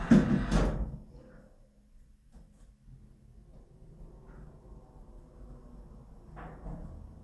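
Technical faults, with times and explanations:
No technical fault stood out on listening to this everyday sound recording.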